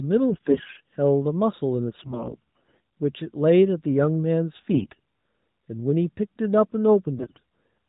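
Four bursts of AMR bit errors, at 0.30–0.78 s, 1.96–2.80 s, 4.72–4.99 s and 7.18–7.39 s, turn the speech hoarse and gargly while pitch and level roughly hold. Corrupted low-priority bits, maybe 15 to 20 percent of them, scramble the pulse positions and fine parameters on the 4 kHz-limited AMR-NB channel.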